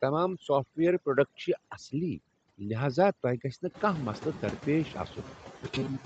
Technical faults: overdone noise removal; noise suppressor artifacts; robotic sound from repeated short buffers

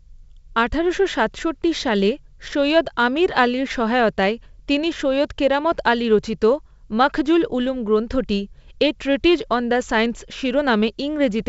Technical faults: none

